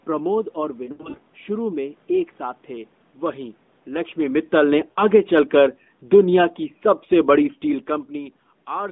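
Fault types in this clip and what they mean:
Lost AMR speech frames: Corrupted frames fail their checksum, so the decoder fills the gaps by reusing the last good pitch and vocal tract settings at fading gain. Around 0.86 to 1.19 s, about 160 ms drops out in bursts of up to 80 ms, giving a warbling, smeared stretch, and 4.92 to 5.02 s has a brief dip.
Automatic gain falling: The gain control judges the input too hot and pulls its gain down gradually. From 4.19 s to 7.96 s the level sinks by about 5 dB, with the room background dropping together with the voice rather than the talker alone fading.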